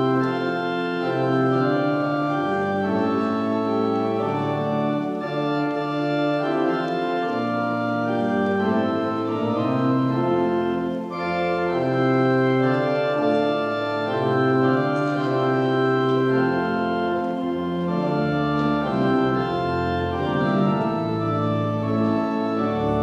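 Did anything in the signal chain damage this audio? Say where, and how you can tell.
No, nothing in the chain seems to have touched this one; I can't hear any stage leaving a mark on the sound anywhere along the way.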